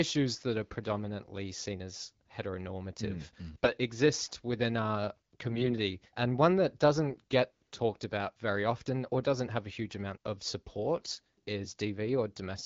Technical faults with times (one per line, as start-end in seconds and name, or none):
3.54-3.72 AMR bit errors
5.48-5.72 AMR bit errors
7.10-7.16 AMR bit errors
10.98-11.19 AMR bit errors